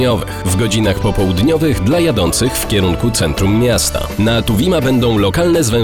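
No technical faults are audible anywhere in this clip.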